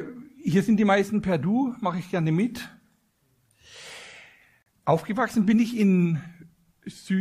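A gap between stream segments opens at 4.62 s and lasts 38 ms, to 4.66 s. The time stamps of two adjoining segments don't meet, which fits 6-second segments, so the player pads the hole with silence. It sounds like a hard-edged dropout, though nothing is actually lost.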